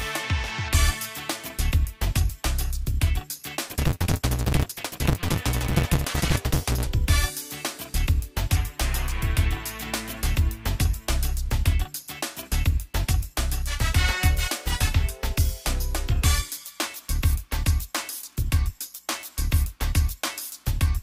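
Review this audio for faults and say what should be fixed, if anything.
From 3.67 to 6.87 s, a block size mismatch (truncated) discards each block's tail, causing a 172 Hz buzz and audio running 1.88 times fast at normal pitch. This fits 256-sample reads. To prevent it, make the writing stage's block size match the reading stage's, or buffer between them so no samples are dropped.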